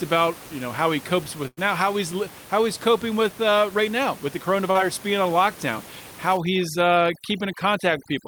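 A speech recording with room noise sitting about 19 dB below the voice. At 1.47 to 1.59 s, a burst of packet loss drops about 100 ms. The receiver stretches the last sound and turns it down, then jumps ahead. At 4.71 to 4.77 s, a short concealed packet loss fills a 37 ms hole, leaving a brief smear. From 6.37 s to the end, overdone noise removal strips the background to twinkling near-silence.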